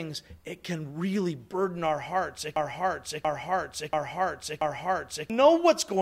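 From 2.56 s to 5.30 s the speech stops moving forward and a single fragment of about 0.68 s plays four times in a row, each pass identical and joined straight onto the next, a broken-record loop. Whatever should have been heard in those nearly three seconds is simply missing. The likely cause is a stall in the player, encoder or stream, which kept sending the last chunk of audio it held until playback recovered.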